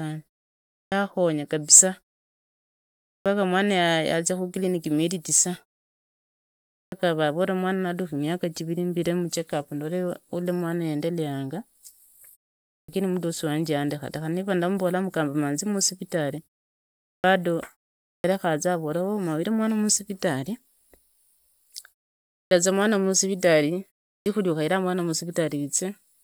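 At eight points where the speech comes back after a pause, the clipped start after a pause fault bites: at 0.85, 3.18 (before "paka mwana"), 6.85, 12.81, 17.17, 18.17, 22.44 ("za mwana masivitali") and 24.19 ("ukhaira mwana"). The output sleeps through the silence and takes roughly 68 to 77 ms to wake, so each phrase's opening sounds get swallowed and it jumps in abruptly.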